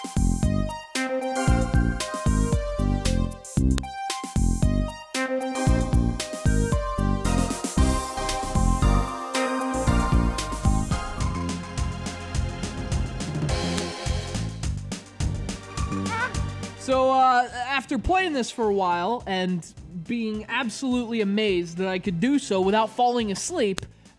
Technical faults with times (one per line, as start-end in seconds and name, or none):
3.78 file header played as audio
13.78 file header played as audio
23.78 file header played as audio